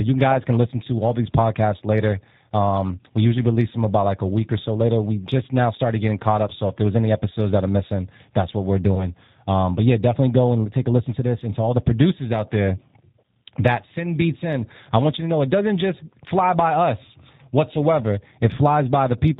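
Speech that has passed through the G.729 codec, and the coding is plainly audible throughout. The bandwidth and texture fit G.729's 8 kbit/s scheme, which doesn't send the waveform. It sends a vocal tract filter, a pitch predictor and a handful of pulses per 10 ms frame, and the decoder resynthesises the voice from these. Everything above 4 kHz is gone, so the speech sounds dull and boxy, with a rough, slightly synthetic edge. A single short gap in the stream, consistent with one lost VoIP packet carrying about 20 ms of audio, is covered by the speech codec's packet loss concealment. For that missing stretch the decoder repeats its last pitch and filter settings at falling gain instead of real data. From 8.95 to 9.06 s the sound smears into a brief buzzy tone or coloured noise that fades, and it stays weak or distorted for a short while after the stream resumes, because each new frame is predicted from the guessed one before it.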